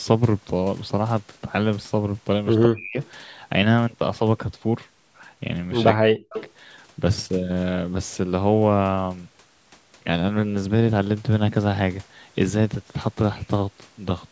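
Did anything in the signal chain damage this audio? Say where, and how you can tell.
Yes. The call processing stage is where the damage happens, and the likely cause is an echo canceller mishandling double talk. From 2.66 to 2.98 s and again from 5.93 to 6.35 s the speech is pushed down hard, by around 40 dB at its deepest, for roughly a third of a second and then close to half a second. That is speech suppressed in double talk: with both ends active, the canceller treated the near talker as echo and attenuated it.

The same echo canceller, likely on a loudspeaker endpoint, also let residual echo through. An echo leak follows each suppression: a short scrap from 3.02 to 3.09 s, sitting about 30 dB under the speech, and a longer, more obvious one from 6.33 to 6.52 s at only about 10 dB down. Both are delayed copies 180 ms behind the original, the acoustic path the canceller failed to subtract. 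The band limit at 8 kHz comes from the call's normal microphone processing.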